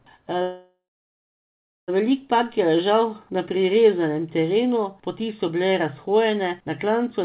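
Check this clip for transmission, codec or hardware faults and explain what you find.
One transmission fault is audible, a call audio freeze from 0.42 s to 1.90 s. The last sound is held as a fading buzz and then falls silent for about 1.1 s. Packets were likely delayed and drained the jitter buffer, so the receiver filled roughly 1.5 s. The speech then resumes where it stopped, with nothing lost, only late. The band-limited sound, with nothing above 4 kHz, fits a G.711 mu-law call path at 64 kbps.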